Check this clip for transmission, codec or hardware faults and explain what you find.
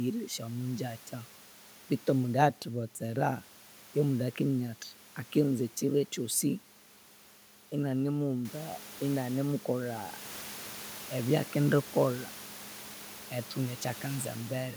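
No transmission, codec or hardware faults are present in the speech; the room noise steps up by about 12 dB a little past 8 s but stays about 18 dB below the voice and belongs to the recording, not the system.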